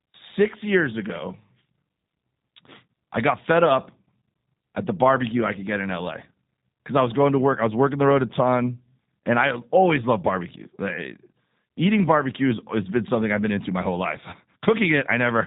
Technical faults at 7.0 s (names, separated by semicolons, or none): G.729 codec